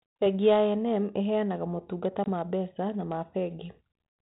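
A speech clip with packet loss on an ADPCM call between "ĩheanaga motungata" and "ma mbeca na ma", 2.24 to 2.29 s. About 20 ms, roughly one packet, drops to hard-edged silence. The decoder's predictor then falls out of step, giving slightly distorted speech that settles within some tens of milliseconds. The band-limited telephone sound fits 32 kbit/s G.726.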